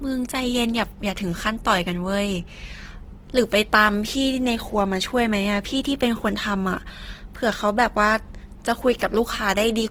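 Throughout the speech, Opus compression damage is plainly audible. The spectrum stays full-band, with content reaching 20.2 kHz, yet the upper bands sound grainy and noisy rather than clean, and voiced sounds take on a rough texture. That pattern is likely the music-mode (CELT) encoder running short of bits and filling bands with folded or noise-like energy instead of leaving gaps, which fits a rate around 16 kbps.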